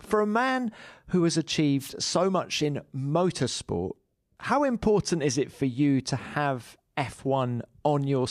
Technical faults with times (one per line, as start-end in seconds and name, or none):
1.79-1.91 wireless microphone noise hit